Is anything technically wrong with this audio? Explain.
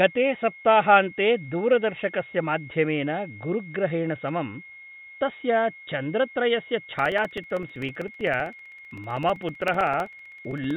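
Yes. Two faults can be heard in this speech.

A switching supply whistle runs through the whole clip. It is a thin high tone near 2.1 to 2.2 kHz. It sits about 20 dB below the speech. Its pitch wanders slightly within that narrow band. A nearby switching power supply is the source. It has dropped into an audible burst mode, or it is beating against another supply.

Periodic USB or driver dropouts start at 6.99 s, just after "तस्य चन्द्रत्रयस्य". They continue to 10.71 s. Every 64 ms a tiny slice of audio, around 2 ms, is replaced by silence. That adds up to several dozen gaps. They are heard as a steady train of ticks over the speech. The cause is a background task that stalls the USB bus or audio driver at a fixed interval.

The audio is also band-limited at 4 kHz, which fits a narrowband call codec.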